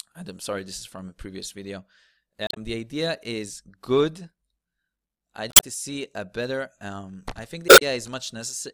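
Brief chirps, squawks, clicks or short holes break into the speech at 2.47 to 2.57 s, 5.48 to 5.63 s and 7.66 to 7.82 s. Each is damaged data in a compressed stream: corrupted bytes leave the decoder misreading frames and losing sync until it finds the next valid frame header.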